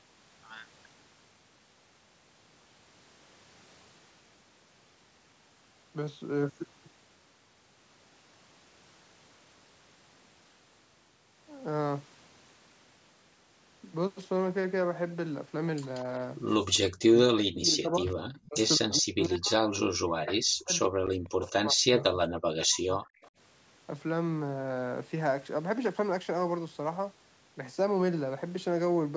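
At 15.94 to 16.0 s a faint copy of the speech returns about 180 ms late and roughly 25 dB down. This echo leak is likely a far-end loudspeaker echo that its echo canceller failed to fully remove, so a short delayed scrap was sent back.

From 17.06 to 23.0 s the speech repeatedly dips or drops out: 17.06 to 18.12 s, 18.46 to 18.58 s, 18.76 to 20.72 s and 20.88 to 23.0 s. The deepest cuts reach around 40 dB, while the short one at 18.5 s is about 25 dB. This is speech suppressed in double talk: the canceller likely turned down the local talker along with the echo while both sides spoke.

At 23.06 to 23.3 s the same echo leak returns at about 180 ms delay, now roughly 30 dB below the speech.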